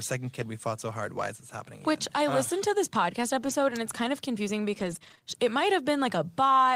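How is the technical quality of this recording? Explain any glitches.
Two kinds of network glitch can be heard in this speech recording.

Lost packet rebuilt from error correction, at 0.41 to 0.43 s and again at 3.41 to 3.51 s, between "listened to this podcast" and "and it's kind of". The missing audio, about 20 ms and then 60 ms, was filled from a low-bitrate backup copy carried in the following packet. There is no gap, but those moments sound briefly rougher and noisier.

Repeated packet loss (robotic sound), from 4.79 to 5.24 s, after "it's kind of confusing" and before "it might". Three short dropouts, the longest 19 ms, were each patched by extending the preceding sound. That stretch comes out choppy, with small pieces missing.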